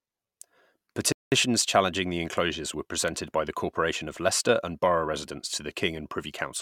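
A playback stall at 1.12 s silences the speech for about 0.2 s, likely because the player ran out of data, before it resumes on "challenging the enclosures were".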